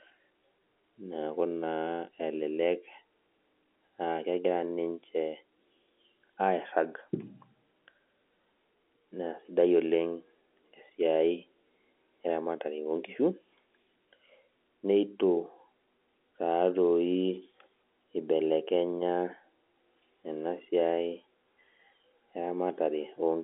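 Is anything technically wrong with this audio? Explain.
No, nothing stood out on listening to this telephone-band speech recording.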